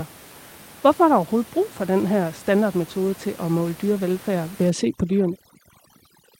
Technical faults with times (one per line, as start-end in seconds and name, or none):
4.70-6.39 overdone noise removal